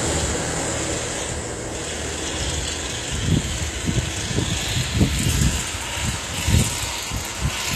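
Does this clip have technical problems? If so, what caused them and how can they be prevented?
Yes. Throughout, the treble sounds bright but synthetic, gritty and metallic, and nothing reaches above about 14.9 kHz. That's likely HE-AAC compression at a low bitrate, around 24 kbps: upper bands are rebuilt from copied lower ones, so harmonics don't line up. Encoding at a higher bitrate, or with plain AAC, avoids it.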